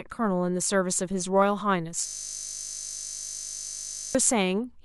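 System hang loop from 2.07 to 4.15 s in this speech clip: a frozen driver replays one 20 ms chunk about a hundred times, producing a steady 50 Hz buzz.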